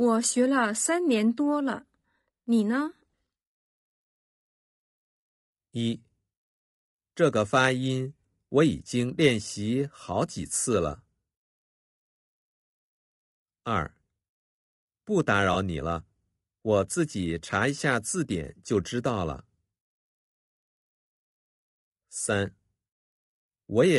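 From the start the speech has a rough, grainy edge, likely from low-delay AAC compression at roughly 32 kbps, where short frames smear the harmonics. Around 15.53 to 15.56 s there's a brief smeared, phasey patch. That's AAC frame loss with concealment, about one frame's worth guessed from the previous spectrum.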